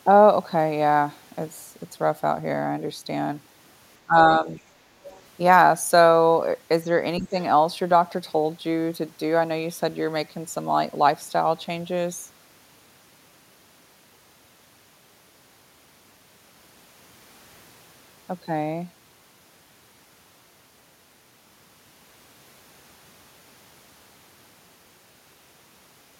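Speech suppressed in double talk at 4.05–4.16 s and again at 4.40–4.49 s: the talker's speech dips sharply, by about 20 dB, in the first stretch and only slightly in the second. Both sides are likely speaking at once, and the echo canceller, unable to separate the talker from loudspeaker echo, turns everything down.

Other side's voice leaking through at 5.04–5.21 s: a faint second voice, about 25 dB below the talker, sits briefly under the speech. This is likely far-end audio from the talker's loudspeaker that the echo canceller did not fully remove from the microphone signal.

Speech suppressed in double talk returns at 7.19–7.37 s, with the talker pulled down by about 10 dB for a fraction of a second. This is likely the same overlap, with the canceller again ducking the near-end speech while the far end talks.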